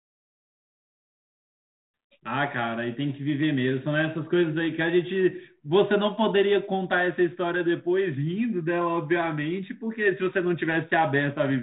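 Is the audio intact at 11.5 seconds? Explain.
Yes, at 11.5 seconds the speech is intact, with no fault at that moment.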